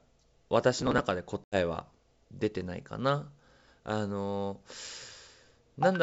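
A wideband telephone speech recording, its band reaching to about 7 kHz in the manner of G.722, carries two faults. From 0.74 to 1.03 s the processor fell behind and missed a long run of audio buffer deadlines. Each late buffer was skipped outright, so the speech is torn by a gritty processor overload crackle. The density of the tiny gaps points to buffers of around 1.5 ms being lost a few dozen times. Then, from 1.44 to 1.57 s, packet loss on the ADPCM call cuts an 80 ms hard-edged silent hole, which fits a handful of lost packets. Because the decoder's adaptive predictor and step size no longer match the sender's, the speech re-enters with brief, slight distortion before the decoder settles back into step.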